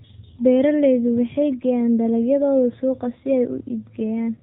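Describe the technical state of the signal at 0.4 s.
At 0.4 s the speech is passing through the AMR narrowband mobile codec, which affects the whole clip. The signal has been squeezed to an 8 kHz sample rate and rebuilt from a vocal-tract model excited by only a few pulses per 5 ms subframe, so nothing above 4 kHz survives. The damage is plainly audible: a dull, band-limited tone with a buzzy, synthetic edge that fits a low mode of around 7.4 kbps.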